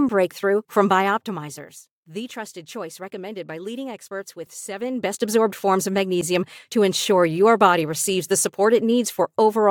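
From 4.76 to 5.32 s a fine ticking, almost a buzz, rides on the speech while its level swings by roughly 15 dB. This is zipper noise: the gain was moved in discrete jumps, around fifty a second, instead of gliding, and each abrupt jump puts a tiny click into the waveform. Strung together over that half-second, the clicks form the zipping texture.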